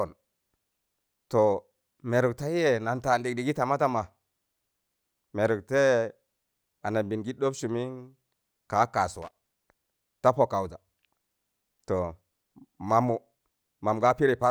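At 9.22 to 9.35 s there's a short burst of loose connector crackle: a worn contact making and breaking, chopping the speech into irregular scratchy pops.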